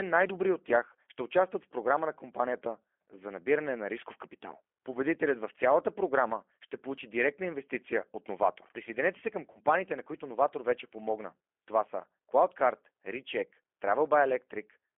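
Throughout the speech runs through the G.729 codec at 8 kbit/s. Each 10 ms frame is rebuilt from a vocal tract filter, a pitch predictor and a handful of pulses, and the line band is confined to roughly 300 Hz to 3.4 kHz. The damage is plainly audible as a rough, slightly synthetic quality. Unlike simple telephone band-limiting, the grain comes from the pulse excitation, not only from the missing highs.

Between 9.52 and 9.60 s, just after "се към" and before "на които", there is VoIP packet loss concealed by the speech codec. About 30 ms of audio went missing, which fits a single lost packet. The decoder stretched its last pitch and filter settings over the gap while lowering the gain, so the sound becomes a brief buzzy tone or coloured noise that fades, instead of silence or a click. The voice stays weak or distorted into the following syllables while the decoder's frame-to-frame state recovers. 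That lingering aftereffect separates it from a plain dropout.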